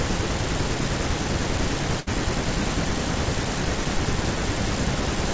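At 2.00 to 2.09 s the speech hangs briefly, a short stall from a late packet: a packet arrived late, the jitter buffer ran dry, and the receiver stretched the last sound for about 69 ms with a faint buzz or dip. Unlike a dropout, nothing is skipped. The speech resumes exactly where it paused, just 69 ms later, over a call path whose G.722 coding leaves nothing above 8 kHz.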